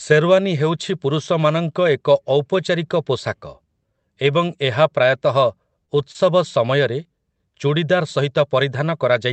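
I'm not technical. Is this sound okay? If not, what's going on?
No. There are brief network glitches in this speech, all within about one second.

Lost packet rebuilt from error correction: at 5.45 s, 5.98 to 6.00 s, 6.14 to 6.16 s and 6.20 to 6.22 s, a 20 ms piece of the call failed to arrive. The next piece carried a rough backup copy, so there's no gap, but those moments sound grainier and noisier.

Short concealed packet loss: at 5.85 to 5.90 s and 6.12 to 6.16 s, a 20 ms piece was missing with no backup. The receiver filled the hole by stretching the preceding sound, heard as a quick smear or wobble.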